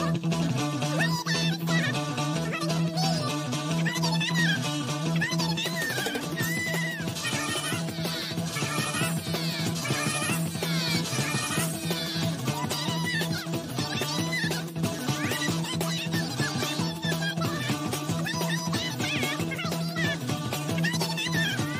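No technical faults can be heard.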